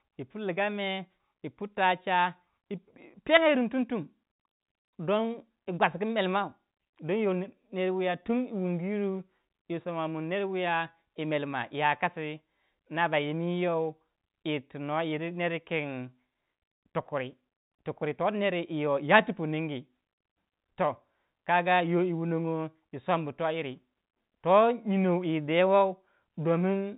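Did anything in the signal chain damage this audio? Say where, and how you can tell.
No damage found; this is ordinary G.711 telephone-band speech.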